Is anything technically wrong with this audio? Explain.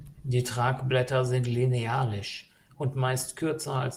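No, no technical faults are audible.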